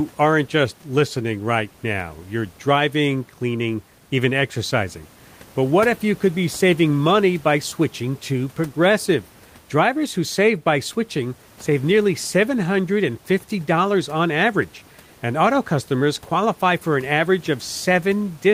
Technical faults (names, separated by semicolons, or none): none